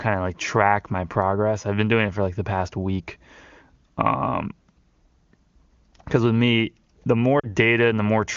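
At 7.39 to 7.46 s, right after "because with me the", there are lost AMR speech frames. About 40 ms of speech fails to arrive intact, which fits two lost 20 ms frames, and the decoder fills the hole by repeating its last good pitch and vocal tract settings at falling gain. The result is a brief warble that fades to near silence within the two frames, not a hard silent gap or click as in a plain dropout. Around it, the AMR wideband (HD Voice) codec sounds clear.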